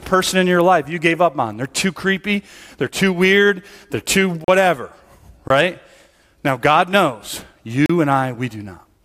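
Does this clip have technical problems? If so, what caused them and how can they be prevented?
Yes, the speech has three blocks of digital silence, at 4.44–4.48 s (38 ms), 5.48–5.50 s (23 ms, which fits a 1024-sample buffer) and 7.86–7.90 s (35 ms). Each is an output buffer left as zeros, cutting in and out abruptly. That hard edge distinguishes it from a faded dropout or concealed packet loss. Larger buffers or higher audio-thread priority would prevent the underruns.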